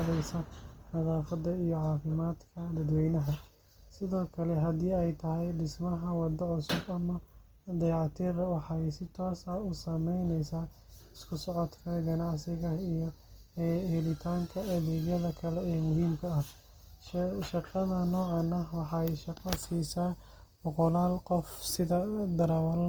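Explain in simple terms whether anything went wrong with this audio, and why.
Start to finish, the speech has a grainy, rough, noisy edge, likely from Opus compression squeezing it hard while still keeping the full treble.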